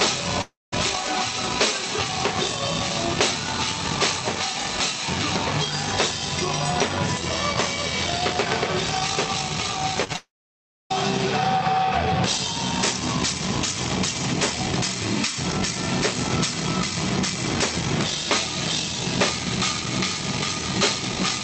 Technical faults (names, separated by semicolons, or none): long network dropout; short concealed packet loss